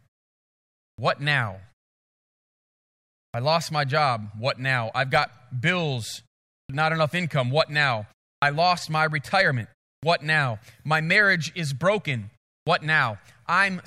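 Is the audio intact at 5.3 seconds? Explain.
Yes, the speech is intact at 5.3 seconds, with no fault at that moment.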